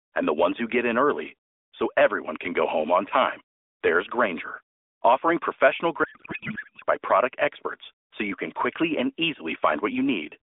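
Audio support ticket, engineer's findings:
Garbled warbling noise replacing the speech, 6.04 to 6.84 s, between "offering professional" and "by product experts so". Codec payload misread at the AMR decoder: octet-aligned frames parsed as bandwidth-efficient, so bits land in the wrong fields. Speech returns once framing realigns. AMR-NB path itself is telephone-band, about 300 Hz to 3.6 kHz, with light codec coloration consistent with 12.2 kbps.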